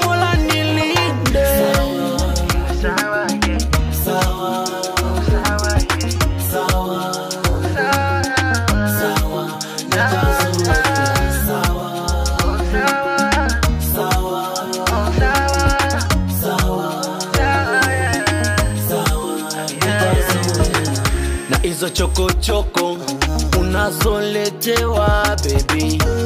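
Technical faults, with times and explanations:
17.73–22.22 s, switching supply whistle: a thin whine wavers between 8.2 and 8.3 kHz, about 20 dB below the sound. A power supply is switching within hearing range.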